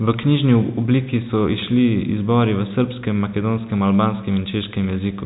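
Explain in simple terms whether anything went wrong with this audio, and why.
Nothing went wrong here: the speech just has the ordinary narrow, phone-like sound of G.711 telephone coding, which keeps nothing above about 3.8 kHz, and that's simply how a normal phone line sounds.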